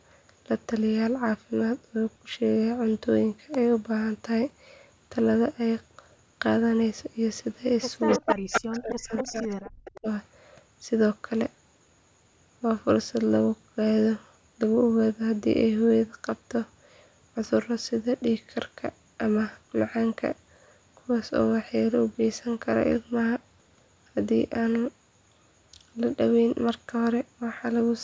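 From 8.08 to 8.35 s, and again from 8.52 to 8.93 s, a second copy of the speech trails the original by about 258 ms, roughly as loud as the talker. Fainter scraps follow at 9.17 to 9.21 s, 9.37 to 9.56 s and 9.85 to 10.0 s. This is echo leak, likely from a loudspeaker whose echo canceller let part of the returning signal through.

Overlapping this, from 8.19 to 9.47 s and from 9.63 to 10.07 s, the talker's speech sinks sharply, around 40 dB at its deepest, and breaks into pieces. This is speech suppressed in double talk, likely the canceller turning everything down when both sides spoke at once.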